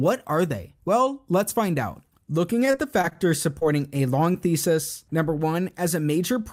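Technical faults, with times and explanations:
2.65 to 3.17 s, repeated packet loss (robotic sound): the audio keeps dropping out in short holes, the longest about 22 ms. Each is patched by stretching the previous sound, and about 17% of the stretch ends up synthetic, so it turns choppy and robotic.
3.59 to 3.63 s and 4.33 to 4.36 s, short concealed packet loss: two brief holes, just before "thesis number" in the second case. Roughly 20 ms went missing each time. The receiver bridged each gap by extending the last sound, then blended back in, which leaves a quick smear or wobble.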